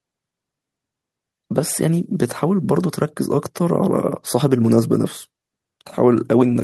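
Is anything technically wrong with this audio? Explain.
No, nothing in this speech recording points to a technical fault.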